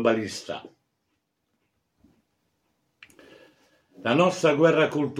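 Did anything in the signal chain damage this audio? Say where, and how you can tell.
No, nothing in the signal chain stood out as damaging this audio on listening.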